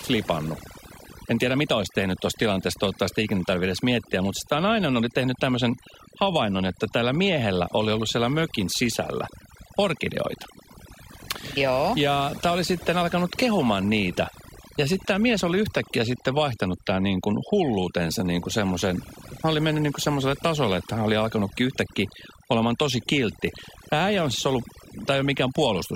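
Overdone noise removal runs throughout the speech: an aggressive noise reducer keeps pulling individual frequency bands down whenever they sit close to its noise estimate. The pauses collapse to near silence with twinkling specks, and the voice loses its quiet detail.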